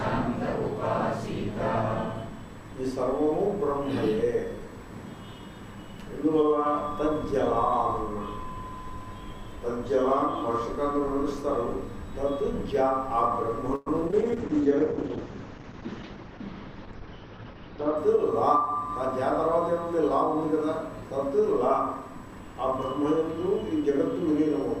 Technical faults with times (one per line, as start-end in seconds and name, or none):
13.75-13.88 call audio freeze
14.08-14.14 short concealed packet loss
14.12-18.03 call bitrate drop
14.15-14.62 jitter buffer slow-down
15.81-16.17 jitter buffer speed-up